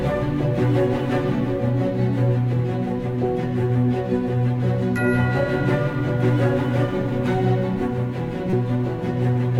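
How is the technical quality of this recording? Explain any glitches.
One glitch in this music stands out: a corrupt frame decoded at 8.50 to 8.53 s. Flipped bits in a single compressed frame got played anyway, throwing energy to wrong frequencies, a sharp, fairly loud chirpy blip.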